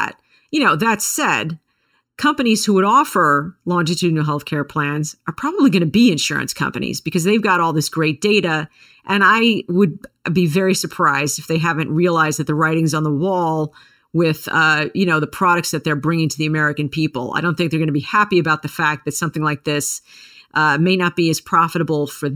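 Channel delay (comb filtering) runs through the whole speech clip. One channel arrives under a millisecond late, and when the two channels are summed to mono the shared content cancels at evenly spaced frequencies, starting around 700 Hz. The result is a hollow, phasey sound.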